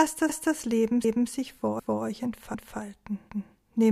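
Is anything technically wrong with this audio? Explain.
Yes. The audio has overlapping chunks. Repeats occur at 0.29–0.55 s, 1.04–1.30 s, 1.79–2.05 s, 2.54–2.80 s and 3.29–3.55 s. The sound was handled in 0.5 s blocks, and each new block restarts 250 ms before the previous one finished. That 250 ms slice plays twice at every join. The result is a stutter every 0.75 s, with a small jump back in the sound each time.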